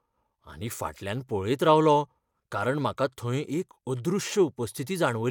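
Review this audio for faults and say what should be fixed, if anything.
No faults; nothing to fix.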